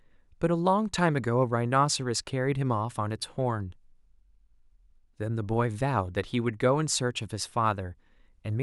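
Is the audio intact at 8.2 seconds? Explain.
Yes, the speech at 8.2 seconds is intact, with no dropout, click or other fault at that moment.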